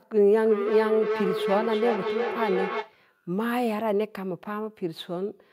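Feedback howl runs from 0.36 to 2.98 s. A loudspeaker's output reaches a microphone on the same call and gains level on every trip around the loop. The repeats build into a tone near 400 Hz that pulses roughly every 300 ms and peaks about 4 dB below the speech.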